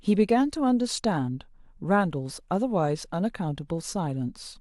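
No technical faults can be heard anywhere in the speech.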